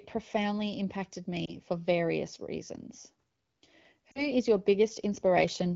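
Automatic gain rising runs from 0.31 to 2.75 s and again from 3.96 to 5.71 s in this speech recording. Each time the gain control judges the input too quiet and raises it by about 4 dB, so voice and background swell together over more than a second. Lost AMR speech frames occur at 1.45 to 1.54 s, where a brief dip or warble fits a single failed frame, and at 4.12 to 4.28 s, which sounds like two consecutive losses. In both places the decoder reuses the last good pitch and vocal tract settings at falling gain, so the sound dips briefly and returns weak or rough. The AMR-WB wideband codec underneath adds only light coloration, consistent with a mid-rate mode.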